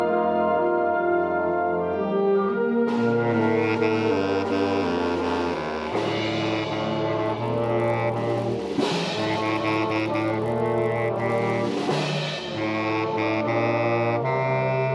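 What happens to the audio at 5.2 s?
Nothing goes wrong at 5.2 s; the audio passes through that moment intact, with no dropout, click or other disturbance.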